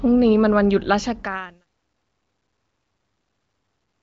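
The speech carries no technical fault; its level fades out smoothly from about half a second in to 1.67 s, and its band stops near 7.5 kHz in a way that fits AMR wideband (HD Voice) coding at a high rate.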